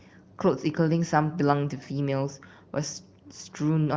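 No technical faults occur in this speech, which is carried over the AMR wideband (HD Voice) codec at 23.05 kbit/s, a rate at which that codec keeps speech clear.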